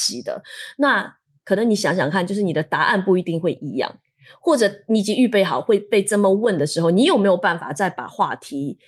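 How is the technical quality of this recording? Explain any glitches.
Nothing here sounds like a glitch to me; there's no dropout, crackle or skip anywhere in this speech recording.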